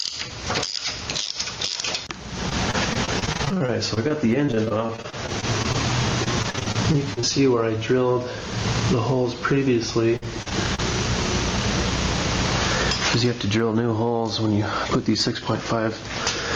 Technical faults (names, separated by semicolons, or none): gain pumping; repeated packet loss (robotic sound)